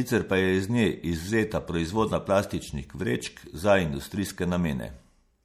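From start to finish the speech carries plainly audible compression damage, most likely from MP3 encoding at a low rate, which fits a 64 kbps encode. With that few bits, the encoder keeps only the frequency lines its hearing model rates as important. The treble is cut off and quieter detail flickers in and out between frames. The result is a watery, swirling texture, chirpy metallic s sounds, and consonant onsets that smear rather than land cleanly.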